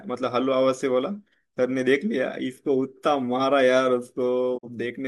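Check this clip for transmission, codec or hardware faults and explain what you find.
One transmission fault is present, a digital broadcast dropout near the end of the speech. From 4.57 to 4.68 s the receiver mutes with a 20 ms fade after a frame fails, losing about 43 ms. That fits a single lost frame. The fade to true silence, rather than a hard click or smeared concealment, marks it as a dropout.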